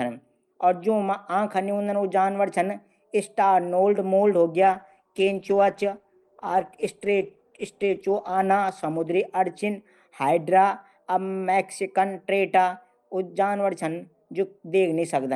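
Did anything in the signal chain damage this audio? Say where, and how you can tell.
Yes, a call bitrate drop in the codec. From 4.62 to 10.19 s the speech turns rough and muffled, and the spectrogram's high band vanishes, consistent with 64 falling to 15 kbps.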